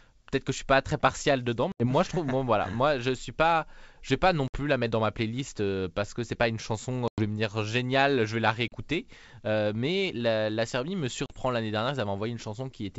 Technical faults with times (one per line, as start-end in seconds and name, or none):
1.72-1.87 packet loss on an ADPCM call
4.48-4.57 packet loss on an ADPCM call
7.08-7.22 packet loss on an ADPCM call
8.68-8.75 packet loss on an ADPCM call
11.26-11.36 packet loss on an ADPCM call